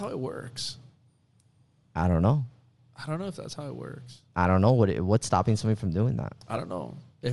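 Throughout the speech, the audio carries a transform codec's signature, most likely Bluetooth LC3 compression. The encoder appears to have spent its bits sparingly on the upper spectrum and substituted synthetic noise for detail there. The result is plainly audible: a breathy, grainy edge on the speech, with a fizzy, slightly synthetic quality in the highs. That texture fits a mid-rate LC3 stream of around 48 kbps using short 7.5 ms frames.

At 6.57 s, just after "somebody from doing that", a lost LE Audio frame interrupts the stream. With no data for that slot, the decoder filled the gap by repeating the previous frame's spectrum with scrambled phase. This produces a brief noisy smear of roughly 7.5 ms, the length of a single frame, where a noisy copy of the preceding sound replaces the speech for an instant before normal decoding resumes.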